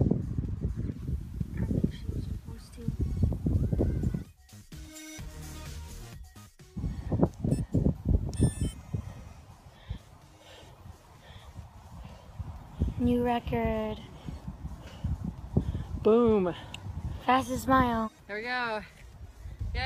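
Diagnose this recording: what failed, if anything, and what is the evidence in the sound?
What failed is reception upstream of playback: the receiver is doing a digital radio blend to analogue. At 0.89 s the sound cross-fades over roughly 139 ms onto the station's FM feed, and a hiss floor comes up, sitting around 40 dB below the programme. The level doesn't move, so the two paths are matched on loudness. At 4.43 s the digital signal is back and it blends home again. This is a hybrid set covering a dropout in the digital stream with its analogue twin.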